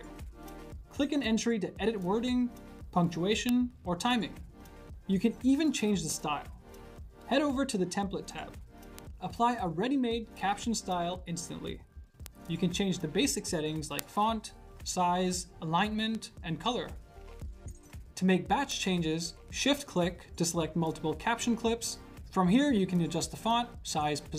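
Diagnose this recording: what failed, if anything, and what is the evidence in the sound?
Six sharp, isolated ticks land at 3.49, 8.99, 12.26, 13.99, 16.15 and 18.72 s. Each is a broadband click with no relation to the surrounding sound. These are bit error spikes from a fault in the digital path, in memory or on a link. A flipped bit throws one sample, or two or three adjacent ones, off by a power of two, and the next samples return to the true waveform. That is why each one is a single click and not a dropout.

At 6.1 to 6.12 s there is a brief jumbled moment: chunks out of order in the buffering or transfer stage. A piece of about 10 ms was delivered one chunk late, so it plays after the piece that should follow it. Nothing is missing, but the misplaced segment creates hard joins where the waveform jumps. At this scale that is heard as a brief garbled moment rather than a repeat or gap.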